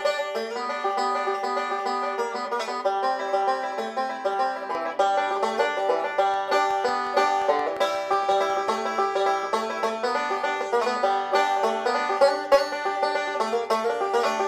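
From 0 to 4.75 s, one channel arrives about 5 ms behind the other before the two are summed to mono, causing channel delay comb filtering. The shared content cancels at evenly spaced frequencies starting near 100 Hz, leaving the sound hollow and phasey, with fixed notches.

Between 6.34 and 8.69 s, a train of clicks appears, likely from electrical interference or a faulty connection injecting repeated pulses. Around fifteen similar clicks land at a regular 5.55 per second, about 5 dB above the surrounding audio, and they are heard as steady ticking laid over the sound.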